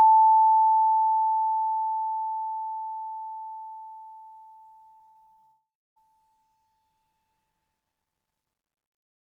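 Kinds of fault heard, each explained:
Repeated packet loss (robotic sound): Seven short gaps hit the music from 4.97 to 5.45 s. Each is patched with repeated sound, giving a choppy, robotic stretch.
Long network dropout: From 5.45 s the music becomes a fading buzz, then 0.3 s of silence. 0.52 s of music never returns, likely lost in a network outage.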